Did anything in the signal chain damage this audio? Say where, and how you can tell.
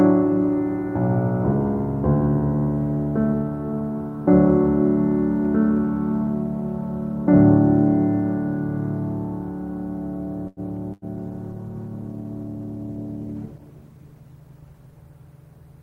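Yes. A short stall from a late packet at the network/jitter-buffer stage, 10.47 to 10.60 s: the music freezes for about 95 ms, visible as a smeared, frozen spectral band with nothing lost.

A burst of packet loss at 10.93 to 11.05 s: about 88 ms of concealment replaces 80 ms of missing music, so the spectrogram shows a fading smear before the sound resumes further along.

A call bitrate drop from 48 to 18 kbps, 11.15 to 15.09 s: the codec codes more coarsely, the music turns muffled and watery, and the spectrogram's upper band disappears.

A jitter buffer speed-up at 13.76 to 14.74 s: pitch-period chunks, roughly a tenth of a second in total, are cut out, so the music runs about 10% fast at unchanged pitch, with waveform periods spliced together.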